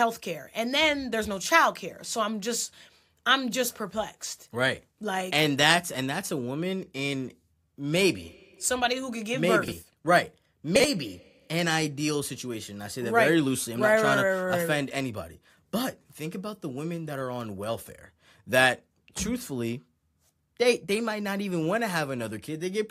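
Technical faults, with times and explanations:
9.64–9.72 s and 10.76–10.84 s, chunks out of order: in each 80 ms span, two 40 ms blocks of speech are swapped, so the later block plays before the earlier one, which arrived or was written one chunk late. No audio is missing, but the reordering leaves three abrupt joins per event where the waveform does not line up. The result is a brief jumbled stutter.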